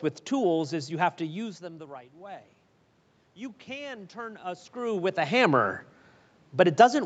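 Speech over a call, with automatic gain rising from 0.71 to 2.54 s: after the input drops about 19 dB, the gain control lifts about 4 dB, swelling voice and room noise together.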